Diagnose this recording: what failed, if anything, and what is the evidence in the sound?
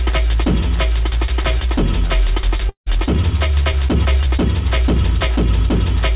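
Network stage, 2.69 to 2.89 s: likely a long network dropout. The sound trails off as a fading buzz or hiss, then 120 ms of silence. 180 ms never returns.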